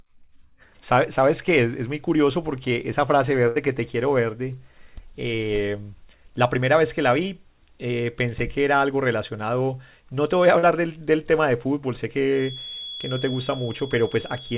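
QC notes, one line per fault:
3.48 to 3.58 s, burst of packet loss: about 80 ms of consecutive audio never arrived in time, so the receiver extended the last sound for roughly 74 ms while fading it down. The result is a brief held buzz or hiss, then the speech resumes further along with that stretch gone.
5.35 to 5.42 s and 10.59 to 10.66 s, short concealed packet loss: each time about 40 ms failed to reach the decoder, and the receiver patched the hole by continuing the preceding sound for 31 ms and 40 ms respectively. Each patch is heard as a short smear or wobble before the real speech blends back in.
12.29 s to the end, feedback whistle: a thin, steady 3.4 kHz tone sits behind the speech at roughly 15 dB below it, swelling and fading slowly in level. It is likely a loudspeaker-to-microphone loop held just at the edge of feedback, ringing without building up, and it sits just under the 4 kHz ceiling imposed by the narrowband call codec.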